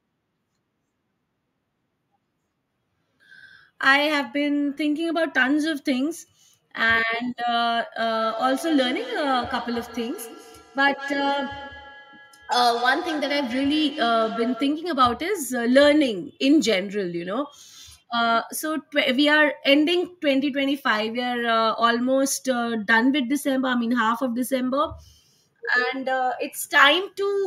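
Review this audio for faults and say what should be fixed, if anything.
Two devices in the same room were joined to the call, and one played back what the other's microphone sent. That microphone picked the playback up again, and its echo canceller, which only knows its own device's output, let it through. The result is feedback echo between two devices from 8.0 to 15.0 s: the speech comes round again roughly every fifth of a second, peaking at about 13 dB below the speech. To prevent it, keep only one device's audio active per room, muting the others' speakers and microphones.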